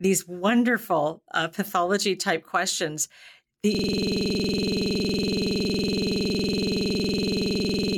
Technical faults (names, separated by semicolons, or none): system hang loop